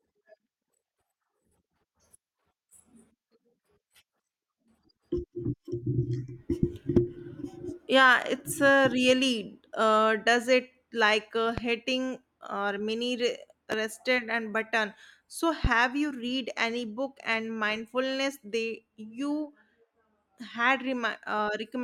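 Three loud pops occur at 11.58 to 11.61 s, 13.72 to 13.76 s and 15.65 to 15.68 s, each a single sharp thump peaking roughly 15 dB above the speech, which continues underneath. The likely cause is an electrical voltage step, such as a switch or connector transient.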